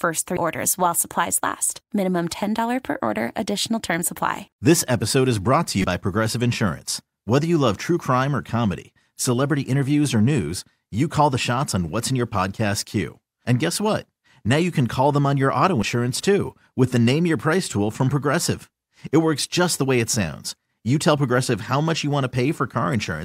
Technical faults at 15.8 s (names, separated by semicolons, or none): damaged data in a compressed stream